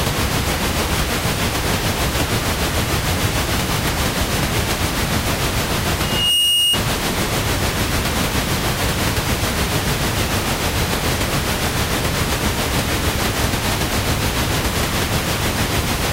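At 5.98 s a loudspeaker feedback squeal kicks in and runs until about 6.81 s. What's happening is that a microphone is hearing the speaker it's driving, and around 2.8 kHz the loop gain tips past one, so that frequency keeps feeding itself. You hear a single piercing tone swell up over roughly a third of a second, ending up about 5 dB louder than the rest of the sound.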